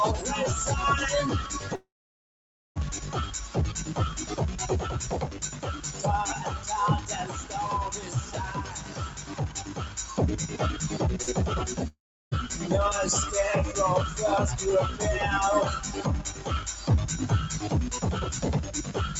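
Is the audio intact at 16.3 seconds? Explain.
No. A noise suppressor built for speech stays active through the whole clip, including this moment. It treats steady tones, ambience and decaying tails as background noise and pulls them down, while sharp onsets pass more freely. The gain therefore rides up and down by something like 10 dB. That makes the sound pump and flutter, with sustained parts thinning out as the suppressor clamps on them.

From 16.28 to 16.47 s, roughly 0.2 s around the time asked, the suppressor cut this sound harder than the surrounding material. It judged the sustained or fading content there to be noise and attenuated it by up to about 7 dB. The result is a dip: the level sinks or the tail is cut short.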